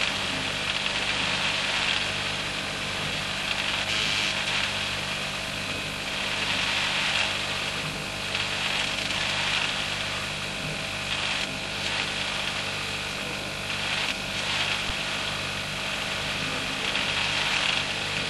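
A recording of everyday sounds with an underrun with held sample at 14.90 s: the output buffer ran dry for 5.8 ms, which fits a 256-sample buffer, and the converter froze on its last value. The waveform shows a short flat line, the spectrogram a thin vertical gap, and about 5 ms of audio is missing.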